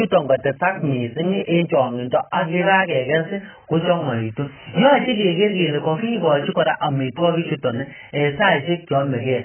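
From start to finish the speech has likely been squeezed through heavy AAC compression, with AAC-LC starved of bits, which fits a bitrate of roughly 9 kbps. With so little data per frame, the encoder discards everything above 3.1 kHz and quantises the remaining spectrum coarsely. The result is dull, muffled speech with no air or crispness, a smeared, warbling texture on sustained sounds, and sibilants that turn fizzy or vanish.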